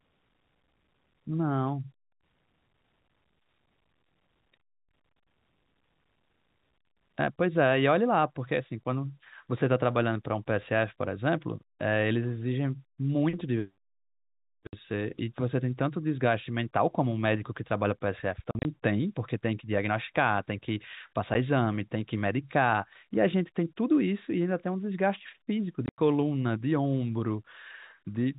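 Packet loss filled with silence breaks this telephone-band speech at 14.67–14.73 s (60 ms), 18.51–18.65 s (scattered gaps, the longest 40 ms), 21.34 s and 25.86–25.98 s (mostly one 90 ms hole). The receiver played silence where packets went missing, so the audio drops out abruptly with hard edges. Every hole is a multiple of 10 ms, which fits 10 ms packets on a G.711 A-law call.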